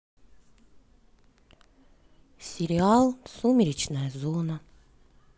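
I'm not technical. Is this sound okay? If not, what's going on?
Yes, nothing wrong can be heard in this recording.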